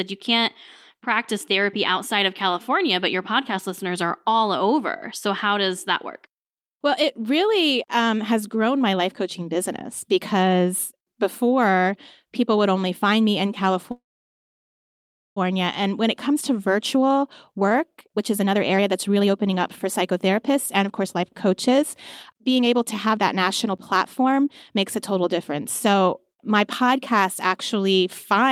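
At 13.91 s, right after "only find me in", the speech stops in a call audio freeze. A brief fading buzz gives way to about 1.35 s of silence until 15.38 s, then the speech resumes where it stopped, losing nothing. Likely cause: delayed packets emptied the jitter buffer.

Two stretches of jitter buffer speed-up follow. From 16.94 to 21.83 s, after "when it comes to", the speech runs about 19% fast at unchanged pitch, sounding hurried. From 22.33 to 26.90 s it is about 11% fast. The receiver trimmed short pitch-period pieces to drain excess buffered delay, roughly a second and then half a second.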